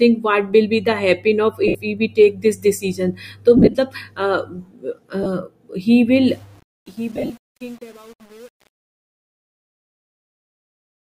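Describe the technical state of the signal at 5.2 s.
At 5.23 to 5.26 s, lost LE Audio frames drop about 22.5 ms of the Bluetooth stream, which fits three 7.5 ms frames. The LC3 decoder patches the gap by repeating the last spectrum with randomised signs, so the speech briefly smears into a noisy, blurred texture.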